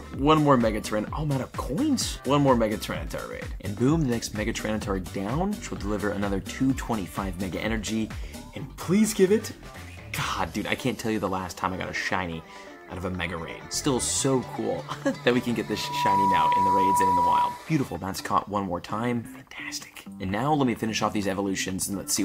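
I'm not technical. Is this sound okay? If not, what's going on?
No. From 15.66 to 17.69 s there's loudspeaker feedback squeal: the microphone hears its own speaker, and one pitch, around 975 Hz, loops round and grows. It swells in just under half a second into a whistle louder than everything else.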